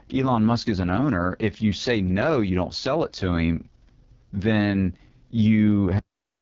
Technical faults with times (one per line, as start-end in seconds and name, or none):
0.00-6.41 AMR wideband (HD Voice) codec
5.99-6.41 cut-off end